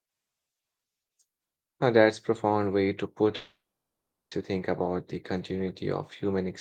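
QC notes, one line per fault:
3.35 to 4.34 s, long network dropout: the speech cuts off and the last sound gets stretched into a buzzy, fading smear for about a fifth of a second, then it's dead quiet for roughly 0.74 s before the talker comes back. About 0.96 s is simply gone, and the speech resumes past the gap instead of picking up where it broke. That's likely the receiver running out of packets and padding with concealment until it gives up.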